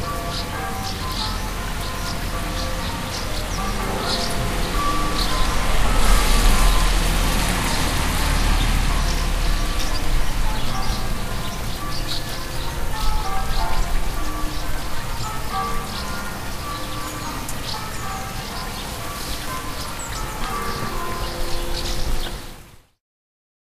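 No technical faults can be heard anywhere in this recording of sounds. Nothing in the audio points to a problem with how it was captured or reproduced.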